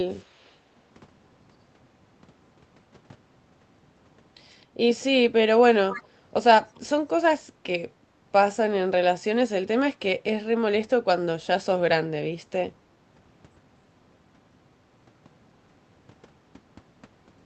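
Faint delayed copies of the speech appear at 0.11–0.55 s and 4.61–4.66 s, then a much stronger one at 5.9–6.07 s, each trailing by 261 ms. That's echo leak, likely a loudspeaker on the far end whose echo canceller let residue back into the call.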